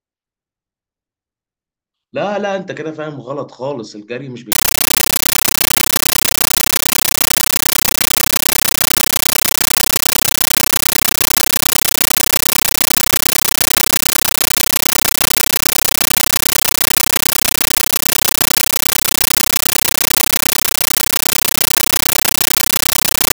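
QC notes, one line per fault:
4.52–23.35 s, compressed stream played as audio: from 4.52 s to the end, the speech is replaced by very loud, chattering static. A Dolby Digital (AC-3) bitstream is being treated as ordinary PCM samples instead of being decoded. Each encoded frame comes out as a 13.3 ms burst of noise followed by zero padding, repeating at 31.25 Hz, which gives the harsh ticking buzz. The density of the bursts fits a 640 kbps AC-3 stream.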